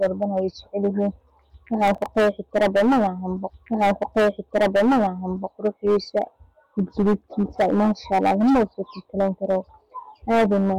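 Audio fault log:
Throughout: hard clipping. The speech is driven about 13 dB past what the chain can pass, so roughly a tenth of the samples are sliced flat at the ceiling. Those squared-off peaks throw harmonics high up the spectrum, giving a harsh fuzz on every loud syllable.
1.88–2.06 s: processor overload crackle. For about 0.18 s the processor misses several deadlines in a row, each leaving a short silent gap with hard edges, which fits buffers of around 3 ms. The string of abrupt dropouts is heard as a gritty burst of crackle over the speech.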